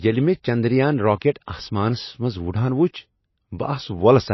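A short speech recording with plainly audible MP3 compression throughout. Nothing is present above 5.8 kHz, where the encoder has cut the treble, and the remaining band carries clear coding damage from discarded weak spectral detail. This likely fits a 24 kbps encode.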